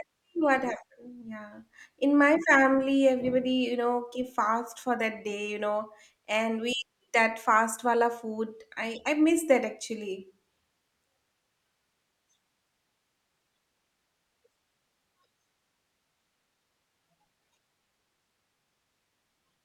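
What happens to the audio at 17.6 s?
Nothing goes wrong at 17.6 s: the speech runs on intact through that moment, with no dropout, click, distortion or other fault to be heard.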